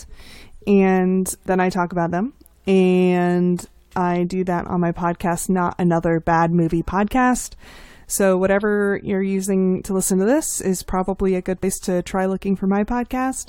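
Compressed frames are skipped at 6.89 s and 11.62 s, where the decoder never plays stretches of the stream. The first loses about 20 ms. The second, after "is probably a good" and before "to try", jumps roughly 100 ms, a few frames of about 23 ms each.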